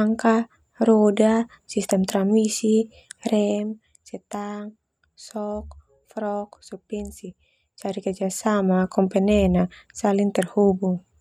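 From 3.39 to 3.9 s the speech drops about 10 dB with zipper noise: the gain moves in unsmoothed steps, around a hundred a second, each a tiny click, giving a buzzy ticking. The same rasp returns from 7.61 to 8.67 s as the level rises back.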